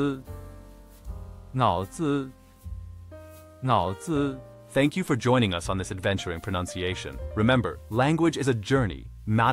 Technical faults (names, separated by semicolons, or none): none